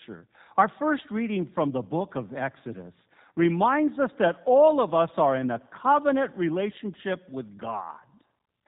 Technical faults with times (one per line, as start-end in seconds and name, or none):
0.00-8.68 G.729 codec